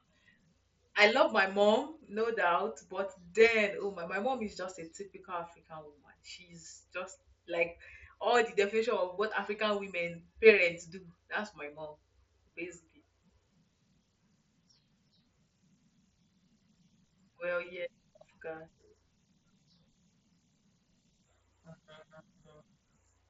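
A speech recording with no technical fault to report. It comes through a Bluetooth mSBC headset codec working as intended, so the sound stops at about 7.6 kHz and carries the light graininess of that wideband link.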